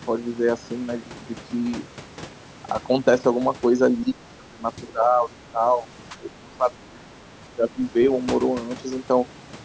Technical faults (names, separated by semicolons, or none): speech suppressed in double talk